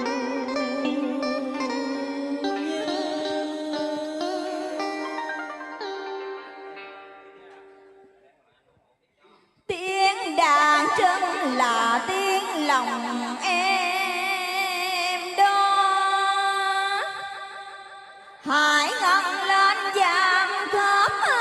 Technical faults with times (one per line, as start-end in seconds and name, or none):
18.27-21.41 adaptive stream at a lower bitrate